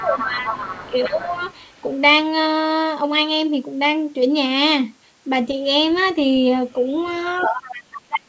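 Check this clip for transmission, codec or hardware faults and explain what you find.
Two echo-canceller problems show up here, one tied to moments when both ends of the call are talking at once, the other to loudspeaker sound getting back into the microphone.

Speech suppressed in double talk happens from the start to about 1.4 s and again from 7.42 s to the end. The talker's level drops by about 15 dB in the first stretch and by about 30 dB in the second, so it dips. That's likely the canceller failing to tell the near talker from loudspeaker echo, so it turned everything down together.

The other side's voice leaking through is audible from 0.0 to 2.01 s, briefly at 5.92 to 6.14 s, and again from 6.72 to 7.98 s. In the first and last stretches it sits about 10 dB under the main talker. The middle scrap is about 30 dB down and very faint. The likely cause is loudspeaker playback reaching the microphone that the echo canceller didn't fully remove. 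The call's mic processing keeps the band capped at 8 kHz.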